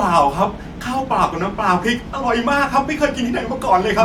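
A short speech recording with nothing technically wrong to be heard in it. No fault of any kind shows up at any point in the audio.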